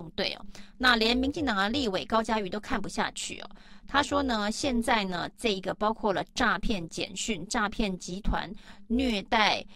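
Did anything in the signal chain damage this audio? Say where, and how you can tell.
Yes, two stages left their mark on this speech. Throughout all of it there's overlap-add ripple: the level pumps up and down by about 11 dB at roughly 200 times a second, which comes across as a metallic buzz riding on everything. That points to a frame-based processing stage, say a time-stretch, noise-reduction or resynthesis step, whose windows overlap without summing to a flat gain, so every frame boundary leaves a dip.

Separately, there's hard clipping from 0.86 to 1.06 s, a short burst where the peaks crackle. The overdrive is small, about 2 dB past the ceiling, so only the loudest peaks get squared off, but those flat tops throw extra harmonics high up the spectrum. It sounds like a converter or sample-format conversion running out of headroom, with the gain set just a little too hot for that loud moment.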